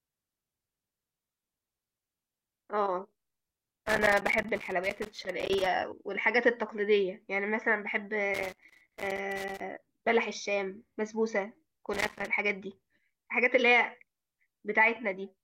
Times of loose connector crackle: 1.04-2.63, 3.86-5.66, 8.34-9.61, 11.93-12.27

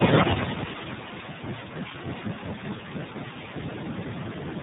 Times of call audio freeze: none

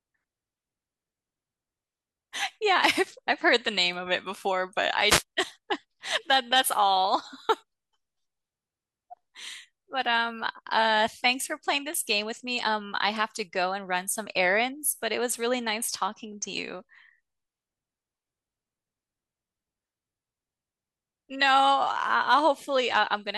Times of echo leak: none

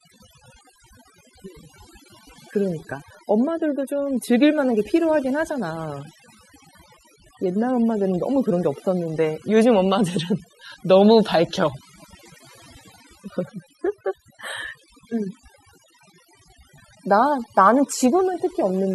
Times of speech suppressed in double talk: none

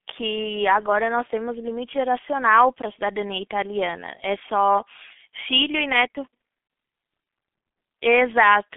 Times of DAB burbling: none

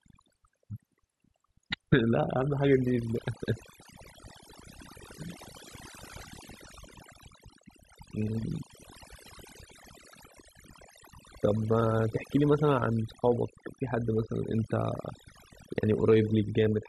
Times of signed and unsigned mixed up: none

